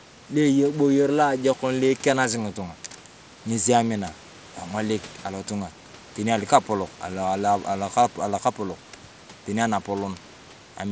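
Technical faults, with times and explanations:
No technical faults detected.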